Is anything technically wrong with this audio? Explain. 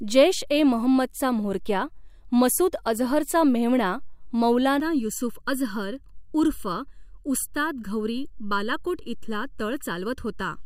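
Yes. From 4.80 s to the end at 10.66 s there is channel delay (comb filtering). One channel arrives about 0.7 ms behind the other, and when the two are folded to mono the shared speech cancels at evenly spaced frequencies, starting around 700 Hz and repeating up the spectrum. The result is a hollow, phasey tone with fixed notches.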